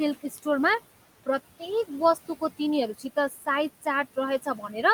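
Across the whole clip the background pumps and dips: between phrases the room noise falls away by about 16 dB, then swells back in under each stretch of speech. These are noise suppressor artifacts. The suppressor treats the steady room noise, which sits only about 17 dB below the speech, as something to remove. It pulls down those bands frame by frame, so the floor opens and closes with the talking.

At 0.22 to 0.46 s, 2.94 to 3.47 s and 4.42 to 4.75 s, parts of the speech go faint and sound swallowed, as if they had sunk into the background. This is speech cut by the noise suppressor. It mistook low-level parts of the speech for noise and attenuated them along with it, by about 14, 13 and 11 dB at the deepest points. Only about a tenth of a second is affected in the first span, around three tenths of a second in the second, and about 150 ms in the third.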